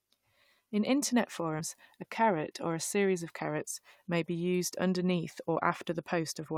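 Damaged data in the compressed stream hits this speech recording at 1.59 s, just before "a caret or a": corrupted bytes make the decoder misread the frame there and lose sync until it finds the next valid header, leaving a brief glitch in the audio.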